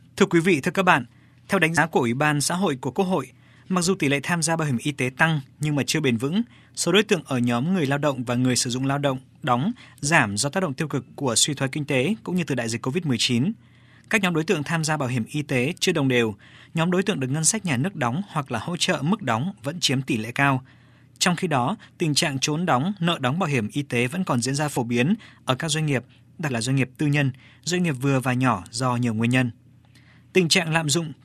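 Compressed frames skipped at 1.77 s, 24.76 s and 26.49 s in this speech clip: whole 24 ms frames never reach the output, so the audio jumps ahead by roughly 100 ms, then 50 ms, then 200 ms, which points to about four, two and ten frames.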